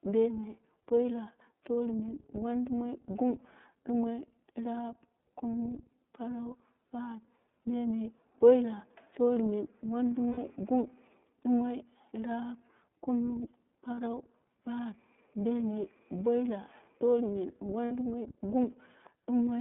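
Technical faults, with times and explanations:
Throughout: iLBC codec. The speech sits in a narrow band of roughly 150 Hz to 3.6 kHz and sounds slightly rough and synthetic, which fits the 13.33 kbps, 30 ms frame mode. A spectrogram shows a hard ceiling near 3.6 kHz with no energy above it.
10.29–10.38 s, 13.95–13.98 s, 17.85–17.92 s: lost iLBC frames, with gaps of 90, 30 and 60 ms. The decoder fills each gap by repeating the last pitch cycle mixed with noise, which sounds like a brief held, buzzy vowel. The voice is right again almost at once. A spectrogram shows frozen, smeared harmonics, and the waveform shows similar repeating cycles.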